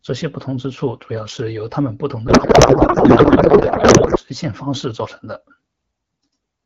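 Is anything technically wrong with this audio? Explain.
Yes. A codec payload misread runs from 2.28 to 4.19 s. The receiver unpacks the AMR bits in the wrong layout, which fits octet-aligned frames being read as bandwidth-efficient, so the fields land in the wrong places. The speech turns into garbled noise and warble that hardly follows it.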